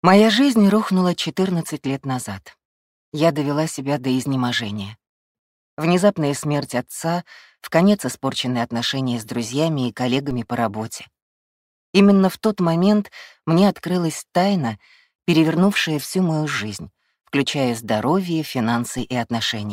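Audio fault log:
10.31 s and 18.99 s, DC step: the waveform's zero line jumps suddenly by about -25 dBFS, so you hear a low thump each time while the sound carries on unchanged. The offset then drains away, as a 5 Hz high-pass would pull it back.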